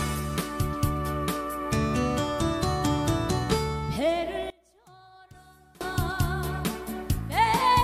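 From 4.50 to 5.81 s the sound drops away by about 27 dB, leaving a faint trace, and the likely cause is one channel inverted: reversed polarity on one side cancels whatever both channels share once they're summed to mono.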